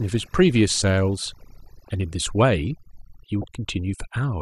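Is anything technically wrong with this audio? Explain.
Yes, two faults. Overdone noise removal, throughout: an aggressive denoiser cuts bands near its noise estimate, leaving near-silent background with twinkling specks. A corrupt frame decoded, from 3.42 to 3.44 s: damaged compressed data, likely a couple of frames, misplaces energy in frequency, producing a brief glitch peaking around -20 dBFS.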